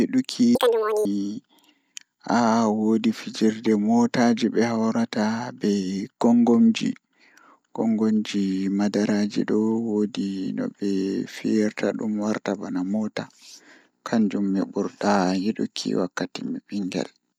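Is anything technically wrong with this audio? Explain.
Yes. From 0.55 to 1.05 s the speech is audio read two samples at a time (double speed): sample pairs are consumed as single frames, so it runs twice as fast and 12 semitones higher. A spectrogram shows harmonics spaced twice as wide.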